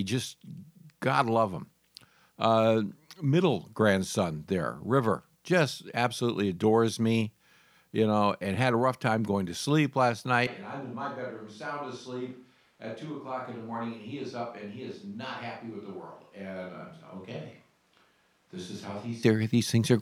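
At 10.47 s, right after "going to sleep last", the speech turns suddenly roomy and hollow, thinner in the bass, about 10 dB quieter, with room noise around 30 dB below the speech. This is likely a switch to a distant microphone, lasting until 19.23 s. The abrupt change both ways, with level, tone and noise shifting together, separates it from added reverb or an EQ change.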